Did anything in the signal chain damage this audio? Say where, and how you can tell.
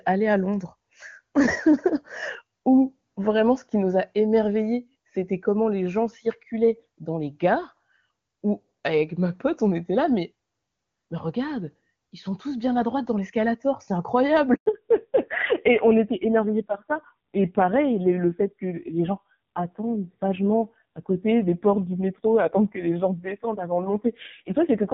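Yes. There is a handover gap at the network stage. At 14.54 s the speech dies away within a few tens of milliseconds and stays silent for 120 ms, until 14.66 s. No frames arrived while the call switched links, so that stretch is simply lost. A waveform shows a flat line there, and a spectrogram shows a blank vertical stripe.

A fallback to narrowband at the codec stage follows from 14.66 s to the end. Before it, the HD Voice path reaches about 7 kHz cleanly, which suggests its top rate. Afterwards a spectrogram shows a hard ceiling at 4 kHz, and the sound turns dull and rough, which fits a low-rate AMR narrowband mode around 5.9 kbit/s.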